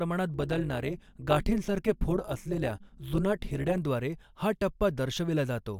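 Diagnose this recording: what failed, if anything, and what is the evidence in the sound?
The frame-based processing stage, where the audio is windowed, processed and resynthesised, produced overlap-add ripple from 0.34 s to 3.79 s. The overlapping windows do not add up to a constant gain, so the level dips and recovers once per frame, with a swing of about 11 dB at a rate of around 200 Hz. On the speech this sounds like a metallic buzz with extra tones around each note over the whole stretch.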